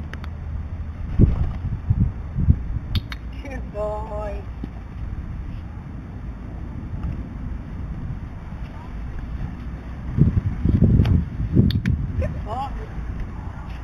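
Imaging from linear upsampling runs through the whole sound: material originally sampled at 8 kHz was raised to 44.1 kHz by joining samples with straight lines, a weak interpolation filter. The top of the original band is dulled, and a mirrored copy of the spectrum sits between 4 kHz and 8 kHz, roughly 35 dB down, giving a faint metallic shimmer. Plain band-limiting would leave that region silent. This energy tracks the content as a reflection, unlike aliasing's unrelated folded tones.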